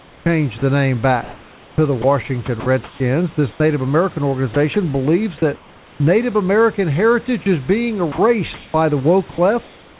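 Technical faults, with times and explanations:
0.0 to 3.6 s, sound chopped by the voice detector: about 1.2 s of quiet syllables and word edges drop out to a steady, smooth hiss. This is likely the sender's voice detector switching off and comfort noise filling in. Unlike packet-loss concealment, nothing is repeated or smeared.
4.54 to 6.0 s, sound chopped by the voice detector: about 0.5 s is again swapped for flat synthetic noise, likely from the detector closing during softer sound. The real room noise sits about 27 dB under the speech.
7.44 to 10.0 s, sound chopped by the voice detector: about 0.7 s of low-level sound is replaced by comfort noise, likely as the detector gates out low-level sound. The gaps are clean and noise-filled rather than glitchy. The call's bandwidth stops at 4 kHz.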